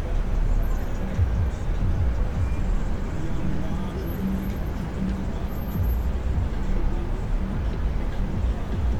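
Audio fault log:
No audible faults detected.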